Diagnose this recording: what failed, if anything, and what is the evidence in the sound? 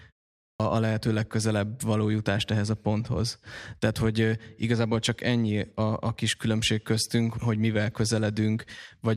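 The failure is a clipped start after a pause at the playback stage. After about 0.44 s of silence, the output device appears to have dropped into a low-power state and needed time to wake. Roughly 117 ms of audio, from 0.48 to 0.60 s, is swallowed, so "a lehető legközelebb való" begins abruptly without its onset. On a waveform, the envelope jumps straight from flat silence to mid-phrase amplitude with no rise. A spectrogram shows a hard vertical edge where the first energy should fade in. The pause itself stays quiet as expected.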